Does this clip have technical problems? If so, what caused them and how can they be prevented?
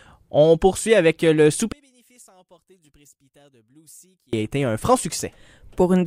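Yes. From 1.72 to 4.33 s the sound collapses to a faint remnant, about 32 dB quieter than the surrounding audio. Nearly all of it almost disappears, then returns at 4.33 s. The likely cause is one channel inverted. When one stereo side has reversed polarity and the pair is summed to mono, the shared content cancels. Only the small difference between channels survives. To prevent it, check polarity on both channels before mixing or exporting.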